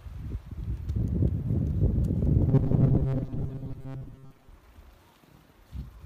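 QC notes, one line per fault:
2.49–4.50 s, robotic sound from repeated short buffers: a rigid metallic buzz at 134 Hz loosely follows the sound. Likely cause: audio arriving too seldom, with about half the time filled by looping a 7.5 ms fragment.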